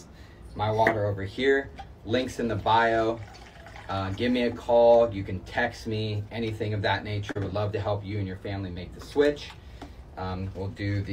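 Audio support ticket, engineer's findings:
Short concealed packet loss, two spots. 7.31–7.37 s: brief smear where roughly 40 ms of audio went missing and the receiver's concealment stretched the last bit of sound to cover it, then cross-faded back. 8.73–8.77 s: same thing, smaller, about 20 ms lost, heard as a quick wobble. Probable component: network path into the jitter buffer, with the decoder's loss concealment doing the patching.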